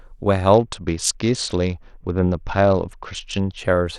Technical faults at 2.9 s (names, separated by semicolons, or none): Bluetooth SBC bit pool drop